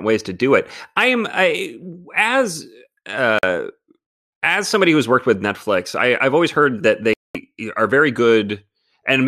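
At 3.39 to 3.44 s and again at 7.13 to 7.38 s the speech cuts to silence, for about 46 ms and then 213 ms, and resumes further on as though it had kept playing. This is likely a Bluetooth dropout, where late packets were discarded. On a waveform or spectrogram each shows as a sharp-edged empty gap.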